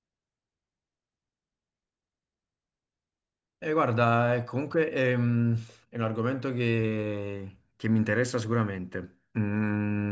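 No technical faults can be heard anywhere in the recording.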